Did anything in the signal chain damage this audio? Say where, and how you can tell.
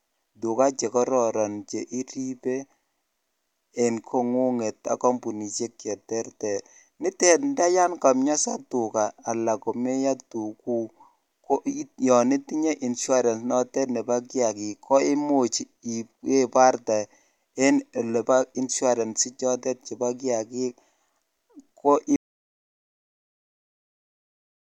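Yes. The input feeding the recorder was likely lost, from a disconnected device, a failed link or a mute, while the recording stage kept writing silence. That is an audio dropout to silence. At 22.16 s the speech stops abruptly, mid-flow, and the clip stays completely silent through to the end. The absence of any room tone or noise floor in that stretch marks the gap as written silence rather than a pause, and whatever was spoken then is gone.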